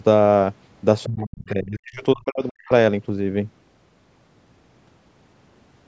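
From 1.06 to 2.7 s the talker's speech dips sharply and breaks up, falling away very deeply for about a second and a half in total. This is speech suppressed in double talk, likely caused by the echo canceller misreading overlapping talk as loudspeaker echo and attenuating everything.

Inside that stretch, from 1.46 to 1.5 s, a brief scrap of the other side's voice leaking through appears, faint and far below the talker. It is likely residual loudspeaker echo that the canceller failed to remove from the microphone signal.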